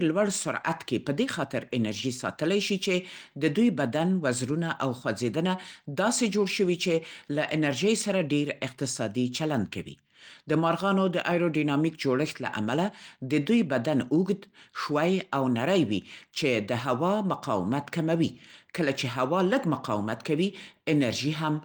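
Nothing goes wrong anywhere in this bit of speech, so there's no technical fault here to point out.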